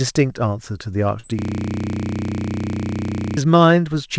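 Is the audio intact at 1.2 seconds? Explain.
No. From about 1.20 to 1.25 s the speech has a short concealed packet loss: roughly 40 ms of audio never reached the decoder in time. The receiver papered over the gap by extending the preceding sound, carrying its pitch forward where it was voiced or substituting shaped noise where it was not, for around 35 ms before crossfading into the real signal again. It registers as a brief smear or wobble, and any short consonant there can be lost.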